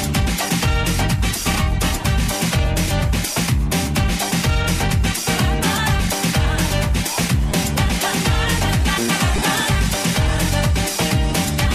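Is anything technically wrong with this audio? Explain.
Yes, there are two repeated buffer faults, at 7.52 s and 9.37 s. Each time, fresh audio failed to reach the output in time, so the device replayed its last chunk three more times. The chunk length fits a 5 ms buffer, so each event lasts about 15 ms and is heard as a brief click or buzz, not a stutter. On the waveform, an identical short segment repeats with abrupt joins. The spectrogram shows a thin vertical broadband stripe with harmonics near 200 Hz.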